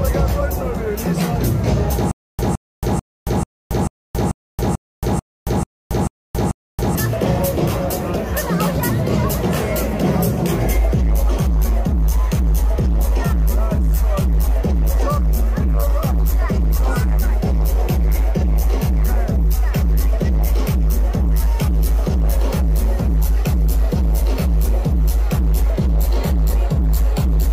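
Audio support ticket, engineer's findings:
Stutter with silent gaps, 2.11–6.95 s. The same 165 ms fragment repeats 11 times, with about 275 ms of digital silence between, every 440 ms. A likely player or stream stall replays its last buffer. Identical repeats separate it from random dropouts.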